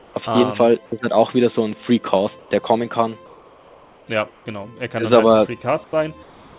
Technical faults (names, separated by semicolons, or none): comfort noise in place of the background; sound dropped by the voice detector